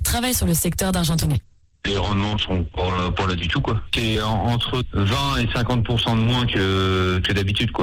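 A stage in the chain is driven about 5 dB past what it can pass for the whole clip, so peaks are sliced flat. This hard clipping affects only a small share of samples, mostly the loudest moments, but each flattened top throws off harmonics high into the spectrum. You hear it as a brittle crackle riding on the peaks throughout, with a gritty edge on the strongest sounds rather than constant fuzz.

From 1.18 s to 7.61 s a call bitrate drop takes hold. The bandwidth estimate collapsed and the encoder was pushed from 96 kbps down to 10 kbps, spending 1.62 s at that floor. With so few bits the coding turns coarse, and the audio band shrinks from 20 kHz to 8 kHz. The sound goes muffled and watery, losing its air and detail, with a rough, smeared texture until the rate climbs back near the end.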